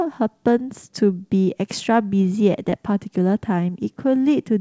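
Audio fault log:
2.70–2.74 s, short concealed packet loss: about 20 ms of call audio reached the decoder too late, so the receiver extended the preceding sound for about 18 ms before blending back, heard as a brief smear or wobble in G.722 audio with nothing above 8 kHz.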